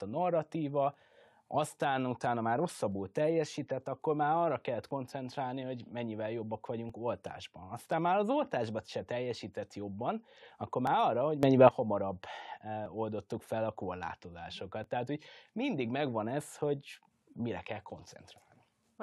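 Right from the start there's an overlap between stream segments repeating about every 2 s, at 0.94, 2.92 (between "narratíva aztán utána már" and "teljesített akkor már arra"), 4.91, 6.90 (just after "hogy mennyivel jobbak"), 8.89 and 10.87 s. Each time two consecutive 2 s segments claimed the same stretch of time, and the player trimmed that overlap out of speech that wasn't actually duplicated. Between 8 and 16 ms go missing and the waveform jumps, so you hear a tiny skip.

Just after "arra hogy", from 11.43 to 11.69 s, the level leaps by about 12 dB, with the speech and the background noise going up together. That's a sudden gain jump, likely a digital gain setting applied from one sample to the next with no ramp.

The segment overlap skips then continue at 12.86 and 14.84 s, still on the same 2 s rhythm.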